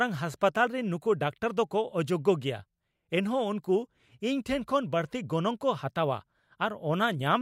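No technical faults are audible.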